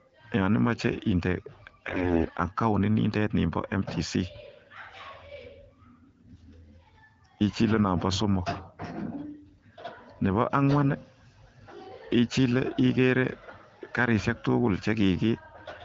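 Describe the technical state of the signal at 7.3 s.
At 7.3 s the speech is intact, with no fault in the signal, and it carries the light coding of an AMR wideband (HD Voice) link running at 12.65 kbit/s.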